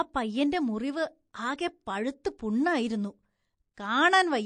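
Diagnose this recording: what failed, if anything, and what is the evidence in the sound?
Codec stage: the speech is plainly damaged throughout, with watery, swirling texture, dulled treble and smeared consonant attacks. This is likely MP3 compression at a low bitrate, roughly 40 kbps, where weak frequency lines drop in and out between frames and the top band is cut.

Codec stage again: pre-echo from 3.74 to 3.77 s. A hiss about 12 dB above the background leads a sharp attack by 34 ms, and the attack itself sounds softened. This points to a long transform window of about 52 ms that never switched to short blocks, so quantisation noise spread ahead of the transient.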